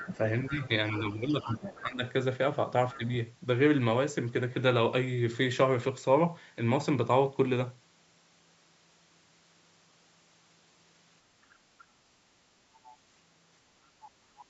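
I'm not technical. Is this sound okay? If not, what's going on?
No. At several points a second, quieter voice can be heard faintly behind the main speech: from 0.0 to 1.79 s, briefly at 2.92 to 2.97 s, then very softly at 11.5 to 11.85 s, 12.74 to 12.97 s and 14.01 to 14.49 s. This is the other side's voice leaking through. Most likely, the talker's phone or computer was playing the other person on its speaker, and the part that cleans that sound out of the microphone missed some of it.

In the opening two seconds, from 0.0 to 2.02 s, the main voice also dips noticeably for about a second in total, and there is another tiny dip at 2.97 to 3.01 s. This is speech suppressed in double talk. It happens while the other voice is leaking in, which points to both people talking at once. The echo-cleaning step then could not tell the talker apart from the speaker's sound, so it turned everything down together.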